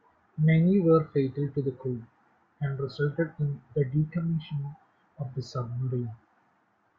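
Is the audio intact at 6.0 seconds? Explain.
No. Sample clock jitter runs through the whole speech clip, including 6.0 seconds. The converter's clock wobbles by a fraction of a microsecond, so each sample is taken slightly early or late, and steep, fast-moving parts of the waveform pick up the largest errors, about 60 dB below the signal. It sounds like a faint hiss or roughness riding on loud and sibilant sounds. A spectrogram shows a diffuse noise haze under strong high-frequency energy that vanishes in pauses. The waveform looks essentially normal.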